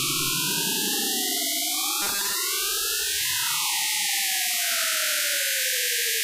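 From 2.02 to 2.35 s, new audio likely stopped arriving often enough, so playback kept filling the gap by looping a very short buffer of about 5 ms instead of the real signal. This is the robotic sound from repeated short buffers. For most of that third of a second the looped slice replaces the actual material, and its repetition imposes a fixed 200 Hz tone, heard as a rigid, metallic buzz that only loosely follows the underlying sound.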